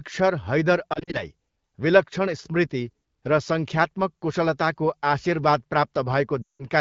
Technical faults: lost AMR speech frames

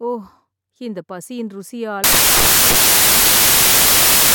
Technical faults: samples built from the wrong bytes

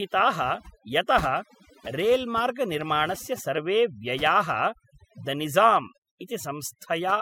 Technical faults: overdone noise removal

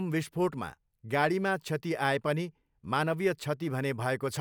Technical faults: none

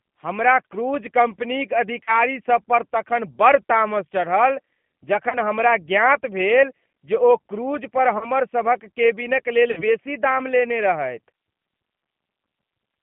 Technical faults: G.729 codec; VoIP packet loss concealed by the speech codec

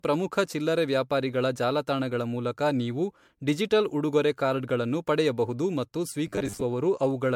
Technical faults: generation loss; robotic sound from repeated short buffers

